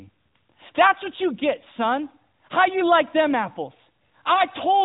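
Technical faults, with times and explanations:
4.34–4.42 s, lost AMR speech frame: a single 20 ms frame failed to decode, so the decoder filled the gap by repeating the previous frame's pitch and vocal-tract settings at reduced gain. The result is a brief dip or warble before the sound recovers, a little rough for a moment. On the waveform the envelope sags briefly. On the spectrogram the harmonics smear flat across the gap, all below the 4 kHz ceiling of the narrowband AMR codec.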